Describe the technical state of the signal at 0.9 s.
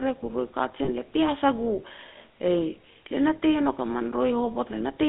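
At 0.9 s the signal is just emerging from lost GSM frames. From 0.84 to 0.89 s the decoder had no good data and reused the last good frame's settings, which fits two lost 20 ms frames. That gap of about 40 ms sounds like a brief rough, metallic ring rather than clean continuation.

Underneath, the whole passage carries plainly audible GSM full-rate codec damage, consistent with 13 kbps coding. The vocal tract model is driven by a sparse, regularly pulsed excitation, giving the speech a buzzy, gravelly texture. The band runs only from about 200 Hz to 3.6 kHz.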